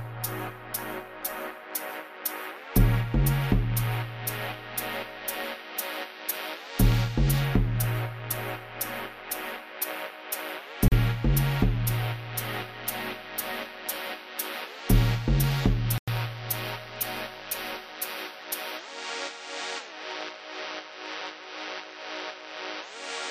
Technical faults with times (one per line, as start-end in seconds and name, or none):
10.88-10.92 Bluetooth stall
15.98-16.08 Bluetooth stall